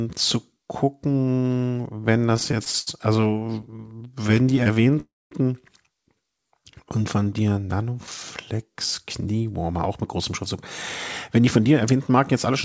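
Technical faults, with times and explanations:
2.30 to 4.97 s, repeated stalls (stutter): The speech keeps catching and dragging. Packets arrived late, so the jitter buffer ran dry 43 times, each gap bridged by extending the last sound, up to 74 ms at once. About 0.52 s was filled, roughly a fifth of this stretch, with nothing lost.
5.00 to 5.33 s, call audio freeze: The sound hangs for about 0.31 s, its held tail fading into roughly 220 ms of silence, then resumes exactly where it stopped. This is likely a delayed burst of packets emptying the jitter buffer, so a gap was inserted rather than anything removed.
6.42 to 7.31 s, jitter buffer slow-down: The speech plays at about 91% speed with its pitch unchanged, and the sounds come out stretched. The receiver was rebuilding its reserve by repeating single pitch periods, adding about 90 ms in total across this stretch.
9.28 to 10.55 s and 11.37 to 12.48 s, jitter buffer speed-up: The speech runs hurried at the same pitch, about 109% and then 107% speed. 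The buffer held surplus audio, so the receiver cut short pitch-period slices, removing roughly 150 ms in the first stretch and 100 ms in the second.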